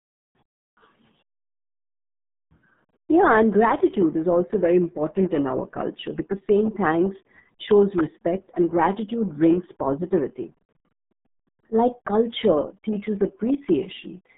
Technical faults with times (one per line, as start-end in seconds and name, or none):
0.00-14.37 RealAudio 14.4 codec